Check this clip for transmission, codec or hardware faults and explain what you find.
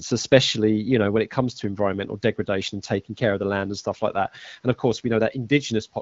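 No transmission, codec or hardware faults turn up in the speech here. The audio has the band-limited character of the AMR wideband (HD Voice) codec with only light coding colouration, which fits a rate of about 12.65 kbit/s.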